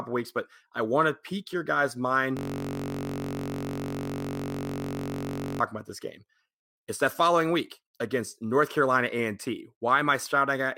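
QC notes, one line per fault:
2.37–5.60 s, system hang loop: after "to pique your guys'" the driver or system froze while the hardware kept replaying one ring buffer, which fits a 1024-sample buffer, so a 21.33 ms slice repeats about 150 times, heard as a steady buzz at 46.9 Hz until "about this game".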